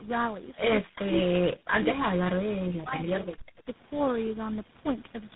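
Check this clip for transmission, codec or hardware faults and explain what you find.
One transmission fault runs through the whole speech clip: tandem speech coding. The call's microphone processing is also audible, but as its normal bass cut rather than as damage.

Tandem speech coding runs from start to finish. The speech sounds like it passed through GSM full rate at 13 kbit/s, then G.711 mu-law, G.726 at 16 kbit/s, G.711 again, and GSM full rate again. That is three speech codecs in a row, each re-encoding the previous one's errors. The result is rough, muffled and warbly, with nothing above 3.9 kHz. A single low-bitrate codec would sound cleaner and less smeared than this compounded degradation.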